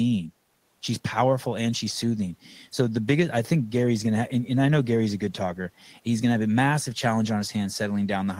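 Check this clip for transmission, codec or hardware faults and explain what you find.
Nothing faulty can be heard in this speech recording.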